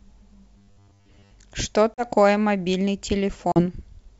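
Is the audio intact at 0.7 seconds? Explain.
No. From 0.58 to 1.32 s, robotic sound from repeated short buffers, likely from 10 ms segments looping, imposes a rigid 100 Hz metallic buzz over most of the speech in that stretch.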